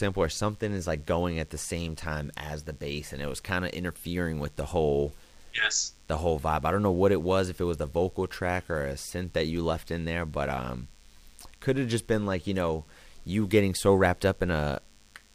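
From start to finish, a steady, thin buzz sits under the speech, pitched at 100 Hz and rich in harmonics, around 35 dB below the speech level. This is DECT cordless phone buzz: a DECT handset or base station nearby transmits a brief radio burst every 10 ms, and the recording's audio circuitry rectifies those bursts, turning the 100 Hz burst rate into an audible tone with a comb of overtones.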